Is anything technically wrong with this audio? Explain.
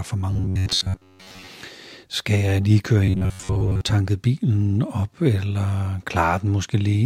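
Yes. Robotic sound from repeated short buffers occurs at 0.31–1.47 s and 3.05–3.81 s, between "jeg lige køre" and "bilen op eller". Audio likely arrives too seldom, so a roughly 10.7 ms slice loops over most of the real speech, forcing a rigid 93.8 Hz metallic buzz.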